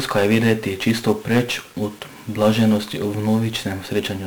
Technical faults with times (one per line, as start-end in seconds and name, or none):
0.00-4.26 1-bit DFPWM compression